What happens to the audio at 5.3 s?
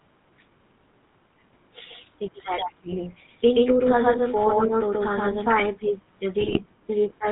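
At 5.3 s the speech is still doubled: a second, full-band copy of the same signal runs about 150 ms behind the first at roughly equal level. This doubled audio track spans 1.86 s to 5.6 s and is likely caused by the signal being captured twice, once through a slower path. The late copy adds no reverberant tail or room colouring. Each syllable is simply heard again, giving an overlapping slapback that stops abruptly at 5.6 s.

Throughout the clip, including this moment, the speech also carries plainly audible GSM full-rate codec damage, consistent with 13 kbps coding. The codec rebuilds the voice from a vocal-tract model excited by evenly spaced pulses, keeping only a third of the excitation samples and discarding everything above 4 kHz. The result is band-limited, dull speech with a buzzy, gravelly roughness, which the doubling smears further.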